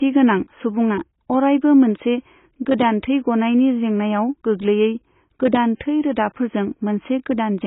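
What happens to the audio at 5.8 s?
Right around there, from 5.76 to 5.81 s, there's pre-echo. The codec smears its quantisation noise back through the quiet moment before an attack, so you get about 51 ms of hiss leading in and a softened onset. The whole stretch also has heavy AAC compression, dull with nothing above 3.8 kHz, likely from AAC-LC at a low rate that fits about 16 kbps.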